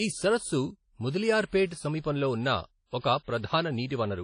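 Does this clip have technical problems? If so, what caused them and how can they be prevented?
Yes. The speech sounds washy and ringing, with hiss that breathes with the signal. Nothing sounds above 10.1 kHz. This is likely WMA compression, consistent with a low bitrate near 32 kbps. Encode at a higher bitrate or with a newer codec.

Pre-echo softens two attacks, at 1.66 to 1.71 s and 2.00 to 2.04 s. Codec noise leaks about 48 ms ahead of each onset. An encoder that switches to shorter blocks on transients prevents this.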